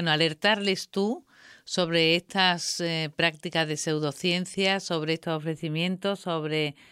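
From 5.23 s, right after "prácticas de pseudociencia sobre", channel delay causes comb filtering: one side lags by a few samples, about a tenth of a millisecond, and the mono sum goes hollow, with its first notch around 5 kHz.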